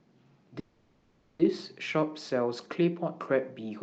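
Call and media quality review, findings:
Call audio freeze, 0.59–1.41 s. Speech stalls into a fading buzz for 0.8 s, then resumes intact. Likely jitter buffer underrun from held-up packets; playback now runs 0.8 s late.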